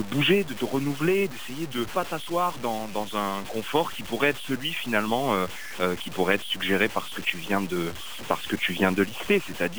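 From start to finish the sound carries a grainy, rasping distortion that changes with the sound itself, most probably low bit depth without dither. The texture fits truncation to 6 bits with no masking noise added, so the rounding error tracks the signal and sits only about 15 dB below it. On a waveform the trace shows coarse staircase steps. A spectrogram shows broadband hash that rises and falls with the signal rather than a steady noise floor.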